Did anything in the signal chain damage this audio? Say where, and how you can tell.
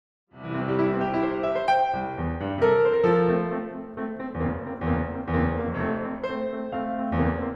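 No, nothing in the signal chain can be heard damaging this music. At the opening the level rises in a smooth fade-in from around half a second to 0.77 s, an ordinary editing move with no click or hard edge.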